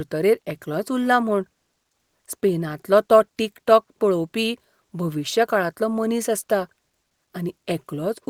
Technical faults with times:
none

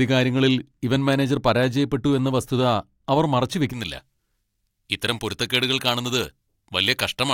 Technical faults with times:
3.73-7.33 pre-emphasis left on

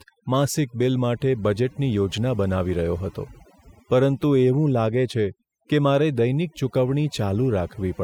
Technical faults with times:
0.00-8.04 overdone noise removal

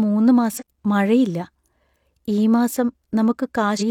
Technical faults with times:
0.56-0.63 damaged data in a compressed stream
3.76-3.82 damaged data in a compressed stream

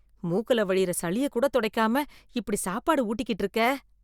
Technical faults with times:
none

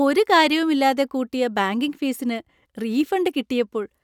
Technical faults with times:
none

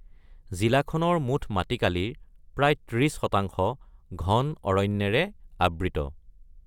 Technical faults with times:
none

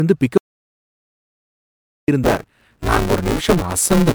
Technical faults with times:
0.00-4.14 generation loss
0.38-2.08 audio dropout to silence
2.23-4.14 buffer tearing

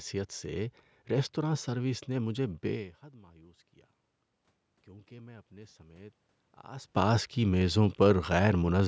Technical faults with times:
4.88-7.85 automatic gain rising

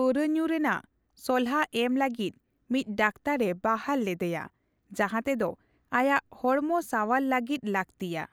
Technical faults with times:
none

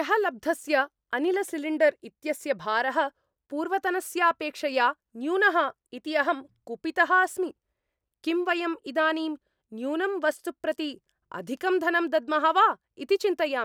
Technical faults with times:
none

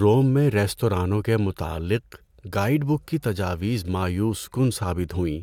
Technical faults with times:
none

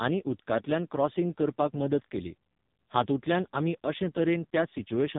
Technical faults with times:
0.00-5.18 AMR narrowband mobile codec

